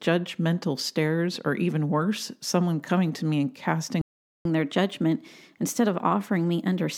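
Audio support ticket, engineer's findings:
Playback stall at 4.01–4.45 s, right after "coming to me and": speech cuts to silence for 0.44 s, then resumes. Likely buffer underrun or blocked audio thread in the player.

Catch-up at higher speed from 4.45 s to end of clip: resampled 1.1x playback, pitch up about one and a half semitones, to recover the lost time after the stall.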